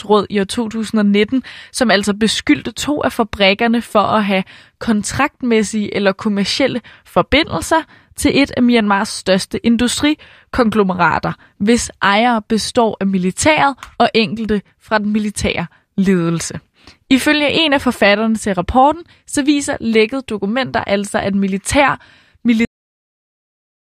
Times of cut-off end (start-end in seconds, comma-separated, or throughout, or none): 22.65-23.97